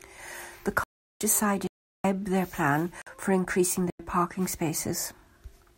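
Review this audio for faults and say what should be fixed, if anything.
Blocks of digital silence: the output buffer likely went unfilled four times, so speech drops hard to silence at 0.84–1.21 s, 1.67–2.04 s, 3.02–3.07 s and 3.90–3.99 s. Three of the lengths fit 16384- and 4096-sample blocks. Give the audio thread enough headroom and buffering to fill every block on time.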